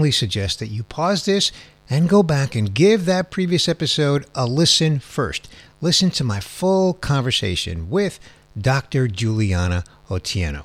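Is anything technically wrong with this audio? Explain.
Yes, mains buzz runs through the whole speech clip, about 35 dB below the voice. Sharp switching spikes leaking in twice per 50 Hz cycle build harmonics far up the spectrum, giving a steady raspy buzz. A spectrogram shows evenly spaced horizontal lines at 50 Hz multiples reaching several kHz, and the waveform carries small spikes every 10 ms.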